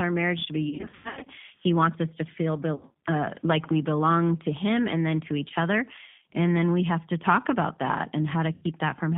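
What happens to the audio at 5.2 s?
At 5.2 s the speech carries G.729 codec damage, present across the whole clip rather than at that moment alone. The codec rebuilds each 10 ms frame from a vocal-tract filter, a pitch predictor and a few pulses, so the voice sounds rough and slightly synthetic. The roughness fits an 8 kbit/s codec. Plain telephone band-limiting to 150 Hz–3.6 kHz would sound muffled but natural. Here the buzzy, reconstructed texture is what marks it as G.729.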